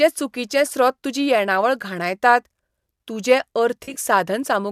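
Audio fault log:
3.84–3.99 s: AAC frame loss with concealment. Short gaps in the stream are scattered across about 120 ms of this stretch, about 80 ms lost in all. The longest unbroken gap is roughly 40 ms, which fits about four frames of 10 ms. The decoder patches each gap from the last good spectrum. The repeated spectrum has no true phase or detail, so the sound turns briefly smeared, noisy and phasey. It never drops to silence.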